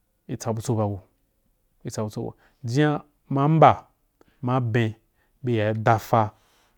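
Nothing in the speech stood out as a technical problem on listening.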